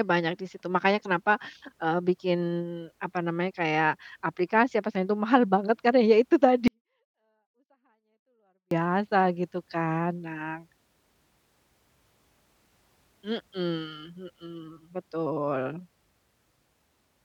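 Right after "banget karena ya itu", from 6.68 to 8.71 s, the speech drops by about 48 dB and stays clean but nearly inaudible: a 24-bit alignment error (too quiet). The 24-bit samples sit in the low bytes of each 32-bit word but were read as full 32-bit integers, so every value shrinks by a factor of 256. The waveform collapses to a near-flat line for those two seconds, and the spectrogram shows the same harmonic pattern, only far fainter.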